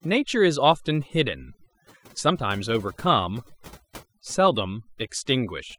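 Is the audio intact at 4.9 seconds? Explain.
No, at 4.9 seconds the background drops and breaks up into twinkling specks. This is overdone noise removal, present throughout the clip: an overly aggressive noise reducer pulls individual frequency bands down whenever they approach its noise estimate, stripping quieter parts of the voice along with the noise.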